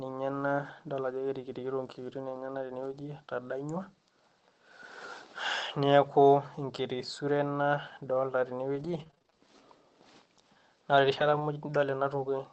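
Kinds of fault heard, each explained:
Scattered short gaps: from 6.99 to 11.42 s the speech picks up about seven brief ticks, smears and hiccups, none longer than roughly 20 ms. Packets were lost or arrived late, and the receiver covered each hole by extending the preceding sound.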